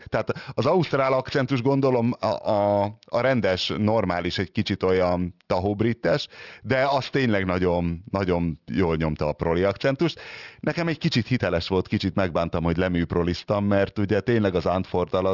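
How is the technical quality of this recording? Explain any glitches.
The recording has a clear technical flaw running through the whole speech clip: aliasing. Sibilants sound gritty and metallic, with unrelated tones that don't belong to the voice, and the spectrum stops abruptly at 6 kHz. This points to a sample rate lowered to about 12 kHz without an anti-aliasing filter, so content above 6 kHz folded back down into the audible band, sitting roughly 25 dB below the speech.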